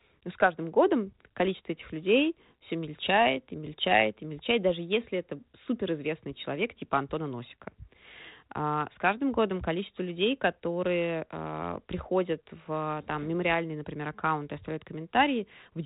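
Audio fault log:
Nothing in this speech recording stood out on listening.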